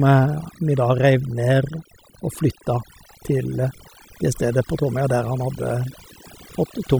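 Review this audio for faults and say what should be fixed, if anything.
Overdone noise removal runs throughout. Noise reduction set too strongly removes frequency bands near the noise floor, leaving twinkling specks. Prevent it by using gentler reduction settings.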